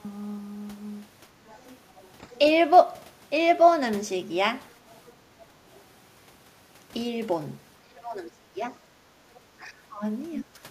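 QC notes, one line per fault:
1.47–2.38 s, 4.90–5.13 s, 5.74–5.80 s: other side's voice leaking through. A faint second voice sits far beneath the talker, longest in the first stretch and only a brief scrap in the last. The likely cause is loudspeaker playback reaching the microphone and the echo canceller leaving a residue.
7.82–8.63 s, 9.60–10.05 s, 10.40–10.50 s: speech suppressed in double talk. The talker's level sinks sharply and unevenly, deepest in the first span, milder in the second, then a short hard dip. Both sides were likely talking at once, and the echo canceller turned the talker down along with the echo.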